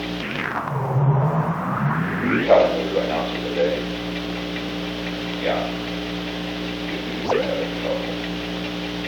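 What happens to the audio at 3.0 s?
Just before 3.0 s, from 2.95 to 2.98 s, compressed frames are skipped. Whole frames of the encoded audio never reach the output, either missing from the file or rejected by the decoder as damaged. The sound jumps forward by roughly 50 ms, a whole number of frames. It is a jump where the audio lurches ahead.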